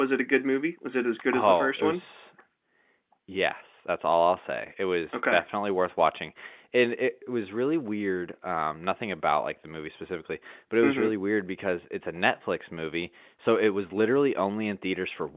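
No technical faults can be heard anywhere in the speech. It comes over a working mu-law G.711 telephone path, so nothing reaches above 4 kHz and a faint hiss rises and falls with the level of the speech, both normal for that format.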